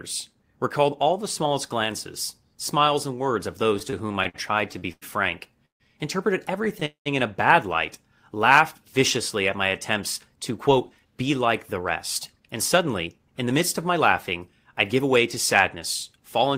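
From 3.79 to 5.04 s the speech drags and stutters through 11 brief holds, the longest 98 ms. These are repeated stalls (stutter): late packets kept draining the jitter buffer, and the receiver extended the last sound for 262 ms in all.

Between 5.65 and 5.82 s the sound carries on as a brief buzz or hiss, then falls silent for 130 ms before resuming where it stopped. This is a call audio freeze that added a 145 ms gap.

From 6.80 to 6.84 s a sound is held 16 ms too long with a slight buzz or dip. This is a short stall from a late packet, with the receiver stretching audio until it arrived.

A second freeze follows from 6.86 to 7.08 s: a fading buzz or hiss, then 120 ms of silence, adding 201 ms. Both freezes likely come from packets held up in transit that emptied the jitter buffer.

From 10.36 to 16.56 s the speech runs hurried at about 105% speed with unchanged pitch. This is a jitter buffer speed-up, which trimmed roughly 300 ms of pitch-period slices to cut accumulated delay.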